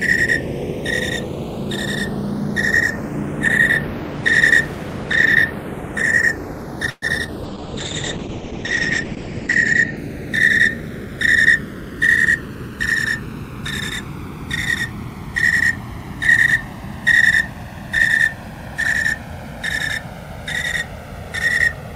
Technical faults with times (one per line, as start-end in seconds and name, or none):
0.00-21.95 channels drifting apart
6.89-7.04 call audio freeze
7.24-7.29 short concealed packet loss
7.44-10.03 call bitrate drop
11.67-12.93 jitter buffer speed-up